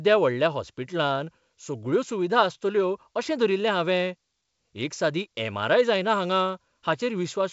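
Nothing stood out on listening to this speech, which comes across as G.722 wideband telephone coding at 64 kbit/s, with nothing heard above about 7.7 kHz.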